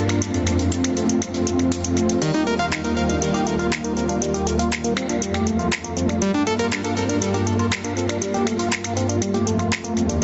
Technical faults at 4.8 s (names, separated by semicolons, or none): gain pumping